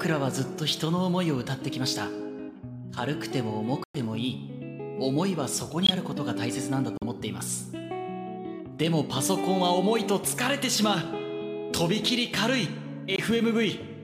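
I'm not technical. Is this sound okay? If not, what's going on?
No. The audio drops to sudden silence four times: at 3.84 s for about 0.14 s, at 5.83 s for about 0.08 s, at 6.97 s for about 0.06 s, and at 13.16 s for about 0.04 s. This is a corrupt frame muted fault. Small chunks of the compressed file were damaged, the player couldn't decode them, and it played silence instead. The sound cuts out abruptly, then carries on at the correct time.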